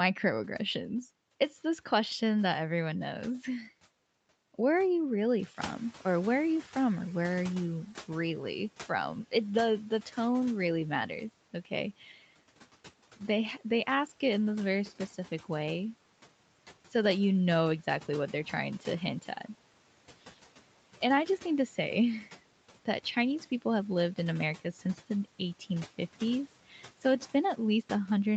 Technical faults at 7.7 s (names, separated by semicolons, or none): noise suppressor catching up